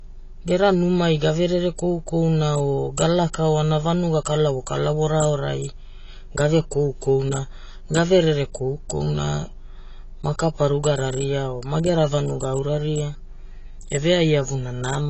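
Speech, dull and smeared for its whole length, with a fizzy, warbling edge on sibilants and nothing above 8 kHz. The likely cause is AAC compression, where a coarse perceptual coder discards high bands and thins the spectrum, which fits a low bitrate around 24 kbps.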